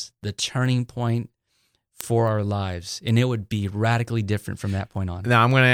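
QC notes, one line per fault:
0.12–5.51 s, word clock ticks: a regular train of sharp clicks of uneven strength runs under the speech about every 0.3 s, around twenty in all. The receiving device is running on its own clock, not locked to the sender's, and the two drift apart by roughly 100 ppm. Each time they slip past each other, a single sample is dropped or repeated, and that tiny discontinuity in the waveform is heard as a tick.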